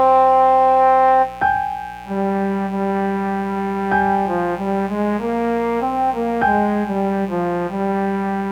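A mains buzz runs from start to finish, sitting roughly 20 dB below the sound itself. Its fundamental is 60 Hz, but a dimmer, rectifier or missing shield has let sharp switching spikes in twice per mains cycle, so harmonics stack up into the kilohertz range. That spread sets it apart from plain hum, which stays a smooth, low tone: here the interference is a steady, raspy buzz with an edgy upper register.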